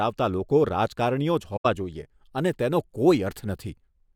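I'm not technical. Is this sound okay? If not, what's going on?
No. Around 1.56 to 1.66 seconds the speech briefly vanishes, a gap of roughly a tenth of a second. This is AAC frame loss with muting: a few small chunks of the compressed audio went missing, and the player filled that stretch with silence. What sets it apart from a plain dropout is that the sound fades out and back in gently around the hole instead of being chopped off sharply.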